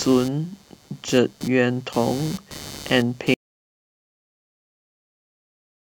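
Computer activity noise runs throughout the speech: a buzzing, chirping layer pulsing at around 150 Hz and about 20 dB below the voice, driven by computer load changes disturbing the shared ground. An audio dropout to silence begins at 3.34 s and lasts to the end; the input was likely lost, leaving total silence with no room tone.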